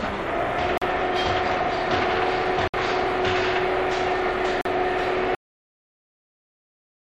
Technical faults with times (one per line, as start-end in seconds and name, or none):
0.78-0.82 Bluetooth dropout
2.68-2.74 Bluetooth dropout
4.61-4.65 Bluetooth dropout
5.35-7.17 cut-off end